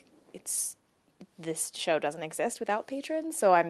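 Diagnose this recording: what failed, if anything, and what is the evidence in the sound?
Nothing stood out on listening to this speech as it came over the call path, and there is no failure to point to at any stage.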